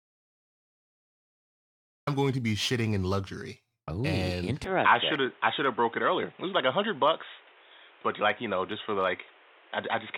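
The input was most likely lost before the recording began, with silence written in its place, so this is an audio dropout to silence: from 0.00 to 2.07 s there is dead silence with no room tone, and the speech breaks in mid-flow with "going to be shitting".

At 4.64 s the input was likely switched to a poorer device. From there to the end, nothing reaches above 3.8 kHz, so the speech turns dull and boxy, with new background noise roughly 30 dB under the voice. There is no gap at the switch and no obvious level jump.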